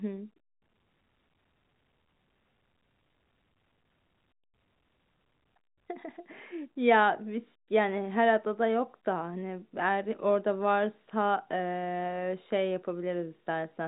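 No technical faults heard.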